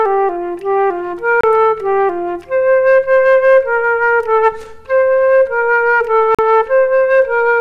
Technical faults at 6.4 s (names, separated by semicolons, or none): Bluetooth dropout